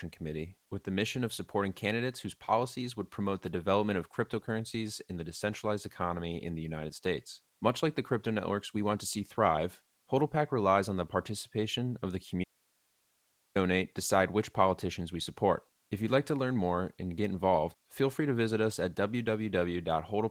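At 12.44 s the speech cuts out abruptly and stays gone until 13.56 s, a loss of about 1.12 s. This is an audio dropout to a faint residue: the gap is not silent but holds hiss roughly 40 dB below the signal, so the path after the break stayed live while the wanted input vanished. The likely cause is an upstream interruption, such as a lost feed or muted source, rather than a pause. The Opus voice compression underneath shows only light coding damage.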